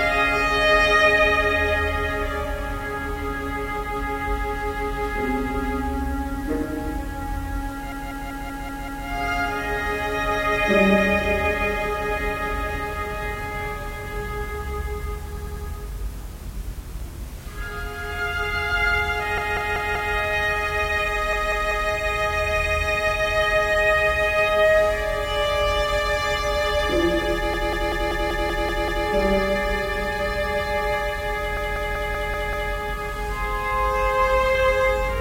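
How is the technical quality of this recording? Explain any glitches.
Quality is marred by repeated frames, a stutter at 7.92–9.07, 15.38–15.66, 19.38–20.14, 21.33–21.90, 27.54–29.07 and 31.57–32.72 s. A short compressed block, 192 ms (96 ms at 15.38 s), is replayed three to eight times. Waveform and spectrogram show identical tiled segments.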